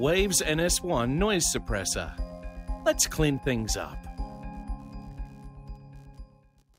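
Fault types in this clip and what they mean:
computer activity noise: A buzz rides underneath the sound from start to finish. It pulses at a rate of around 70 Hz. It sits roughly 40 dB below the sound itself. The cause is the computer's own workload. Changes in processor, graphics or mouse activity disturb the ground that the audio circuit shares. The buzz follows that activity rather than the sound being recorded, so it jumps up and drops back with the computer's activity.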